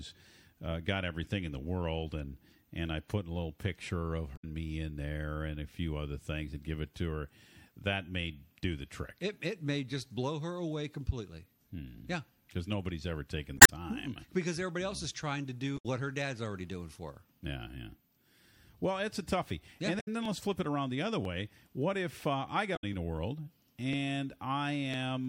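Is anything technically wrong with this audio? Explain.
Yes, this speech clip has two kinds of fault.

Damaged data in a compressed stream shows up at 4.33–4.44, 13.55–13.70, 15.75–15.86, 19.97–20.08 and 22.73–22.84 s. Corrupted bytes make the decoder misread those frames, lose sync and hunt for the next valid header, so each spot is a short chirp or squawk of about 0.1 to 0.15 s. Unlike the dropouts, these come at irregular times.

Periodic USB or driver dropouts run from 17.45 to 24.94 s, about ten of them spaced 1.0 s apart. Each time, a background task stalls the bus or driver and roughly a millisecond of audio is skipped, splicing the waveform together with a small discontinuity. That is heard as a steady, metronome-like tick during speech. The strict one-second spacing and tiny length set it apart from the longer, irregular stream corruption, which overlaps this stretch at 19.97 and 22.73 s.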